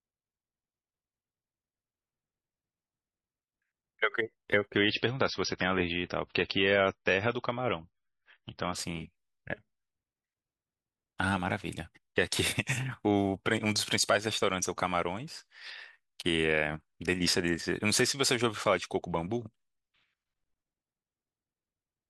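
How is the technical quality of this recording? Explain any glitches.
One glitch stands out. From 4.75 to 8.75 s, the speech abruptly turns dull, with nothing above 6 kHz. This is an adaptive stream at a lower bitrate, which fits a temporary switch from 128 kbit/s MP3 to roughly 20 kbit/s.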